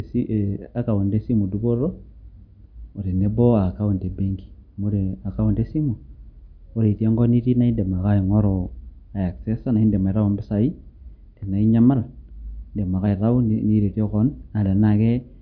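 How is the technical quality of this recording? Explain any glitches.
No glitches or technical faults turn up anywhere in the recording, so there is nothing to explain.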